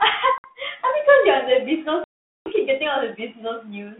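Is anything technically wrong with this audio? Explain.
Yes. There is packet loss on an ADPCM call. Sound drops to hard-edged silence at 0.38 to 0.45 s, losing 60 ms, and at 2.04 to 2.49 s, losing 420 ms. The decoder's predictor and step size lose track of the sender. On return, speech is slightly distorted briefly.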